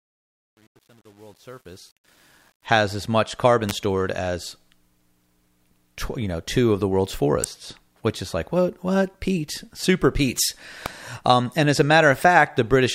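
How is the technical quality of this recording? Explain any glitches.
The recording has two kinds of fault: a gritty fade-in at the start and three sharp clicks later on.

Truncation distortion on the fade, 0.0 to 2.66 s: the fade-in was processed with too few bits, which fits about 9-bit resolution, and no dither. The quiet part turns into coarse steps, so from 0.0 to 2.26 s it sounds grainy. It clears just before "has as much carbon".

Electrical switching spikes at 3.7 s, 7.44 s and 10.86 s: a nearby switch or static discharge likely induced brief arcs onto the audio line. Each one is a sharp snap or a tight cluster of clicks laid on top of the speech. The first falls between "has as much carbon" and "stored as", the second between "two of the world's" and "which is like what".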